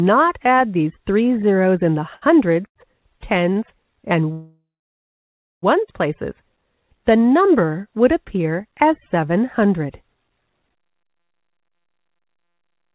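At 2.14 s and again at 2.68 s the sound hangs for a moment, held on its last sound for 75 ms and then 81 ms before carrying on. Each is a short stall from a late packet: the jitter buffer ran empty, the receiver stretched what it had until the packet arrived, and playback resumed from the same point, so nothing is lost but the timing slips.

From 4.32 s to 5.64 s the audio stops. The last sound is drawn out and fades, then about 0.98 s of silence follows before the sound picks up exactly where it left off. This call audio freeze, 1.3 s long in total, was likely caused by packets held up in transit, which left the jitter buffer empty until they arrived.

From 10.86 s to 12.88 s the sound rushes ahead at 136% speed with its pitch unchanged. This is a jitter buffer speed-up. Too much audio had built up in the buffer, so the receiver trimmed many tiny pitch-period slices in a row, removing about 0.7 s to bring the delay back down.

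Throughout the clip nothing is heard above 4 kHz, which fits the 64 kbps G.711 A-law call path.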